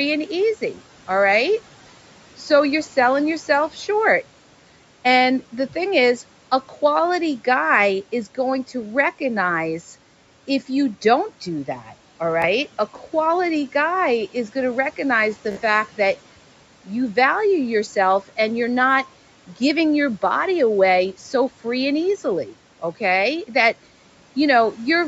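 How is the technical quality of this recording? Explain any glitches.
Two short Bluetooth stutter events interrupt the speech; the rest of the audio is limited to about 8 kHz by call microphone processing, with room noise sitting about 23 dB below the speech.

At 12.42 to 12.46 s, and again at 15.52 to 15.61 s between "going to recognize the" and "that you value", wireless data arrived late or not at all, so the receiver replayed its last buffered slice. The first gap is about 15 ms, which fits one lost packet, and gives a brief flutter. The second, about 46 ms, loops the slice several times into a quick buzz before the speech picks up further along.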